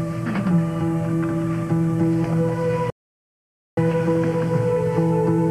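There's a playback stall here: the audio cuts to silence at 2.9 s for about 870 ms, likely from the player starving for data or its thread getting blocked.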